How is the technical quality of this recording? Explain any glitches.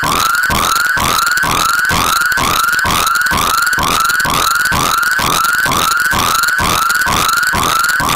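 The recording has one fault, present throughout. Integer overflow: the signal was pushed about 4 dB past the integer limit, so roughly 2 percent of samples, those on the loudest peaks, wrapped to the opposite sign instead of being held at the ceiling. Each wrap snaps across the full range, producing sharp cracks on the peaks. That flip, rather than a flattened top, is what sets it apart from ordinary clipping, which sounds duller and more compressed.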